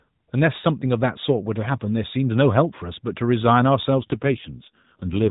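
A speech clip carried over AMR narrowband mobile coding, with only light codec damage early on. From about 3.98 s to the end at 5.30 s there's an AMR rate drop: the voice turns rougher and buzzier with no gap or band change, which fits the link pushing the codec from 12.2 down to 5.9 kbps.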